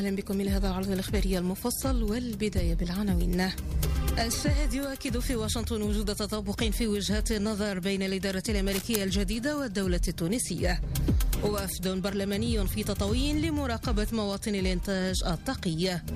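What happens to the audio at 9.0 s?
A worn cable or connector was likely being moved, its contact resistance jumping rapidly and injecting dense, uneven noise bursts. From 8.68 to 9.01 s this cable scratch noise rasps over the audio as a fairly loud scratching, roughly 10 dB below the signal.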